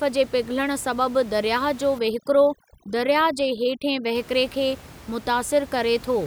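From 1.99 to 4.15 s, overdone noise removal suppresses bands near the room noise, leaving near-silent gaps with twinkling specks.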